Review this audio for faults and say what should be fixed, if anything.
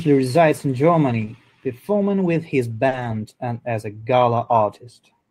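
The speech has two stretches of lost packet rebuilt from error correction: 1.09 to 1.23 s, just after "resides in", and 2.91 to 3.17 s. There's no gap, but those roughly 80 ms and 140 ms of audio come from the low-bitrate backup copy carried in the following packets, so they sound rougher and noisier.

There are also two short concealed packet losses: 1.25 to 1.29 s, still before "performing with his", and 2.87 to 2.93 s, after "performing with his" and before "and as a". Nothing arrived there, so the decoder stretched the last sound over roughly 20 ms and 40 ms, which gives a brief smear or wobble.

Both come from packet loss on the network path, so the fix is a steadier connection or a larger jitter buffer that lets late packets arrive before they're needed.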